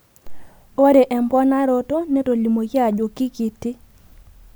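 No technical faults are audible anywhere in this recording.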